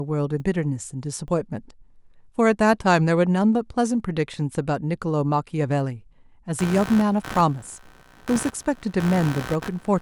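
A speech recording with two problems. At 0.4 s, 1.28 s and 8.36 s there is a small jump forward in the speech, and no gap of silence. Each time, something like 40 ms of sound seems to be skipped. These are likely dropped buffers (overruns): the recording program failed to collect a block of samples before the hardware overwrote it, so the audio on either side of the missing block is joined directly. From about 6.59 s to the end, a buzzing, chirping noise sits under the speech, pulsing at around 70 times a second and roughly 15 dB below the speech level. This is computer activity noise. Changing load on the processor, graphics card or mouse disturbs the ground shared with the audio circuit, so the noise follows what the computer is doing rather than the speech.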